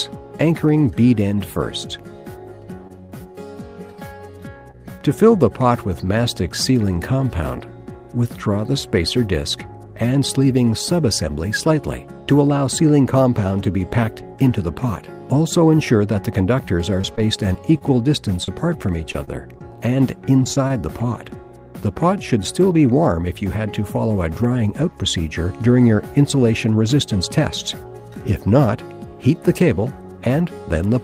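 Three stretches of packet loss interrupt the audio. The first is repeated packet loss (robotic sound) from 2.87 to 3.39 s: a handful of holes, the longest about 20 ms, arrive in quick succession, and each is patched by stretching out the sound just before it. About 15 percent of that half-second is synthetic, which gives it a choppy quality. On a spectrogram, the harmonic bands flatten into frozen, copied slices at each hole. The waveform shows short, too-regular repeated cycles where the real signal should keep changing.

At 4.71 to 4.75 s a single short concealed packet loss drops about 20 ms of audio. The receiver bridges it with roughly 24 ms of continued sound and then blends back into the real signal, so it is heard as a brief smear or wobble. On a spectrogram this appears as a thin vertical seam where the texture briefly holds steady. The waveform may show a small discontinuity in amplitude at the join.

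From 17.01 to 20.72 s come scattered short gaps: around ten isolated losses, each a few tens of milliseconds at most, totalling about 180 ms missing and concealed over a small fraction of the span. The sound stays clear between them, but there are sporadic hiccups. On a spectrogram these show as widely spaced narrow slivers of smeared, repeated content. The waveform shows occasional tiny glitches rather than a continuous disturbance.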